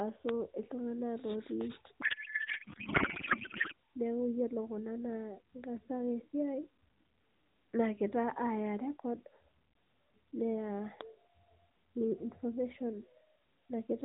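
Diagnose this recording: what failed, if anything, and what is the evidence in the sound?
The codec payload misread is in the codec and transport stage. From 2.0 to 3.7 s the speech gives way to garbled noise and warble that barely tracks it, then recovers abruptly. The rest of the clip shows only the mild 4 kHz band limit of AMR-NB. The pattern fits octet-aligned AMR being parsed as bandwidth-efficient. The decoder reads well-formed frames with every field shifted, producing synthetic noise until the framing realigns.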